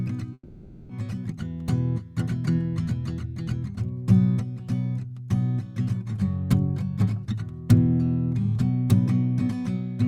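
Right near the start of this music, from about 0.33 s to 0.91 s, there's what sounds like a long network dropout. The last bit of music gets stretched into a buzzy tail that fades over roughly half a second, then there's a short gap of near silence, around 50 ms, before the music picks up again. About 560 ms of the music is simply gone, most likely because the packets never arrived and the receiver papered over the hole.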